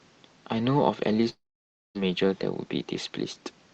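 From 1.29 s to 1.97 s the speech cuts out. The last sound smears into a brief fading buzz, then 0.56 s of silence follows, and the audio resumes with 0.66 s lost. The likely cause is a long network dropout that the receiver concealed.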